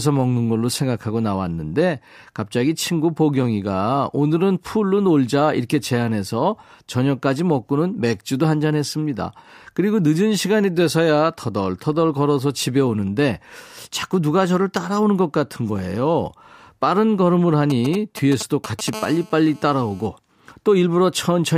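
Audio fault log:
17.70 to 18.90 s, GSM signalling bursts: a galloping dit-dit-dit of brief raspy 217 Hz buzzes, sitting roughly 10 dB below the speech. A nearby 2G phone exchanging short signalling bursts, their radio pulses rectified by the audio circuitry.
18.93 to 20.07 s, GSM phone buzz: a hard, steady, harmonic-rich buzz at 216.7 Hz, about 19 dB below the speech and unrelated to it. A nearby 2G phone in a call, transmitting continuously in 217-per-second bursts that the audio path rectifies into sound.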